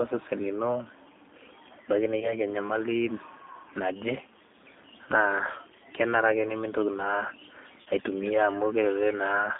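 From the start the speech carries the sound of the G.729 codec, most likely the G.729A variant at 8 kbit/s. It rebuilds each 10 ms frame from a vocal-tract filter, a pitch predictor and a few pulses, so the voice comes out rough and faintly synthetic. The line passes roughly 200 Hz to 3.6 kHz. On a spectrogram nothing shows above 3.6 kHz or below 200 Hz, and the harmonics look smeared and grainy.

From 2.20 to 2.39 s there is VoIP packet loss concealed by the speech codec. The gap fits one lost 20 ms packet. The decoder fills it by extending its last pitch and filter at falling gain, which gives a brief stretched sound that fades, and the voice stays thin for a moment after the packet stream resumes. On a spectrogram this looks like the last spectrum held and then dimming. The waveform shows a short stretch whose envelope decays.

From 7.82 to 7.89 s the same concealment happens again. 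This time about 40 ms is missing, which points to two consecutive lost packets. The extrapolated sound is stretched and fades, and the voice recovers distorted before it settles. On the spectrogram the last spectrum holds in place and then dims. The waveform shows a stretch that shrinks in amplitude before normal variation returns.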